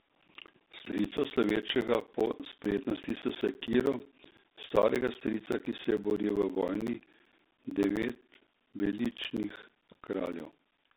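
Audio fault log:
throughout: G.726 ADPCM. The speech sits inside a narrow telephone band of roughly 200 Hz to 3.7 kHz, with nothing at all above 3.8 kHz, so it sounds boxy and dull. On top of that there's a harsh, rasping hiss that swells and fades with the speech level. That comes from coding each sample as a coarse difference from a running prediction, and the grit here fits the 24 kbit/s mode rather than the cleaner 32 kbit/s one.
0.09 to 10.91 s: periodic USB or driver dropouts. Every 64 ms a chunk of roughly 10 ms drops out and is replaced by silence, around a hundred and fifty times across the clip. You hear it as a steady, rapid ticking or buzzy chatter riding on the speech, only where there's signal to interrupt. Something on the bus or in the driver is stalling on a fixed schedule, and the gaps' regular spacing gives the ticks their machine-like rhythm.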